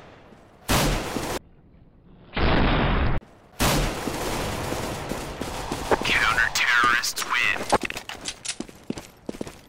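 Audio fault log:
7.52 s: gap between chunks. A hard-edged hole of about 7 ms interrupts the sound at a 4-second chunk join. Nothing is lost, only delayed.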